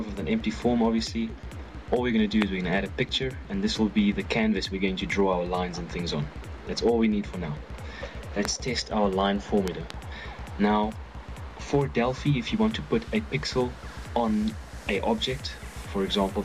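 Loud pops occur at 2.42 to 2.44 s, at 8.45 to 8.47 s, and as a pair between 9.68 and 9.93 s. The first is about 20 dB above the sound, the rest about 15 dB. Each is likely a sudden voltage pulse from a plug, switch, static or driver glitch, riding on top while the sound continues underneath.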